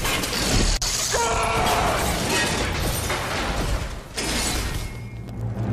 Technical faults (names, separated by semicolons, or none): loud pop